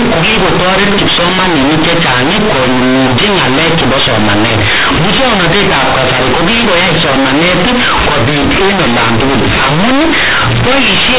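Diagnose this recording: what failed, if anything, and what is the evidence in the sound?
The failure is in sample-format conversion: companded audio read as linear. A-law bytes are being played as plain 8-bit samples without expansion. Throughout the speech, quiet passages swing as hard as loud ones. The result is very loud, buzzy distortion and heavy noise in the pauses, over an otherwise intact 4 kHz telephone band.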